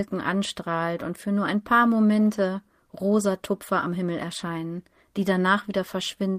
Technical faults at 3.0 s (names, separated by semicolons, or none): none